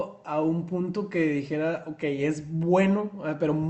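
Speech carried over a WebRTC call path, its high end stopping at 8 kHz in a way that fits an Opus call codec, with nothing in the signal pointing to a technical fault.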